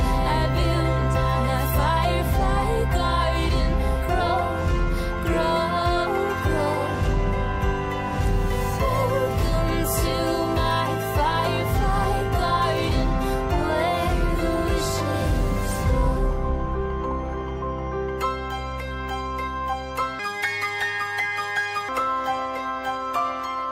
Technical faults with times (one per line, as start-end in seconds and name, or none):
20.19-21.89 section at the wrong speed